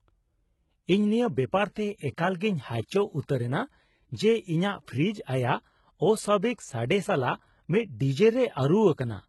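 Throughout the speech, the treble sounds synthetic and gritty, with nothing above 11.8 kHz. This is likely HE-AAC compression at a very low bitrate around 16 kbps, where band replication rebuilds the upper spectrum and leaves smeared, repeated patches on a spectrogram. From 2.37 to 2.41 s, pre-echo puts a 38 ms hiss ahead of an attack: quantisation noise fills the gap, visible as broadband haze before the transient.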